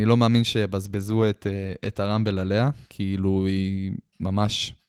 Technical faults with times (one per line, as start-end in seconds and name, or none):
0.84-3.07 call bitrate drop